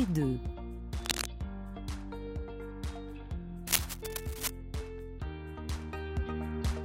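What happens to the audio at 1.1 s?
A worn cable, connector or control was likely disturbed between 1.03 and 1.26 s, its contact resistance jumping about from instant to instant. Because the signal passes through that unstable contact, the result is cable scratch noise: for roughly a quarter of a second, a dense, irregular burst of scratching and rustling sits over the audio at around the same loudness as the sound itself before clearing.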